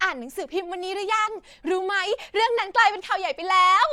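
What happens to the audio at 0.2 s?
Bluetooth LC3 compression affects 0.2 s and the whole clip: the speech has a grainy, breathy edge, likely from noise-filled upper bands, which fits 10 ms frames at roughly 48 kbps.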